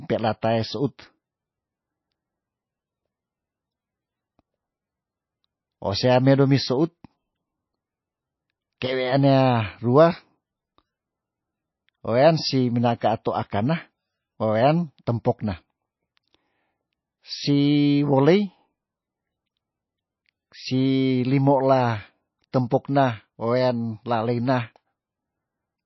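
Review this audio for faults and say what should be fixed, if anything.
Throughout the speech, the encoder has likely been starved of bits in MP3 compression, consistent with a very low bitrate around 18 kbps. It cuts everything above 5.8 kHz and switches weak frequency lines on and off, so the sound turns dull, watery and swirly, with metallic chirps on s sounds.

At 8.80 s there is pre-echo. An attack fell late in a transform block, and quantisation noise sized for it spread backwards into the quiet just before it, giving a short hiss about 13 ms long and a softened onset.

Re-encoding from the original source at a much higher bitrate, or with a lossless format, would remove both faults.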